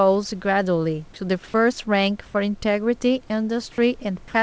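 From 2.26 to 2.34 s, comfort noise replaces the background for 80 ms, likely through discontinuous transmission. The spectrogram shows a flat, textureless grey band there.

From 4.28 to 4.34 s, sound is dropped by the voice detector, likely because it took the speech for background. About 30 ms vanishes, and the waveform flattens into steady noise.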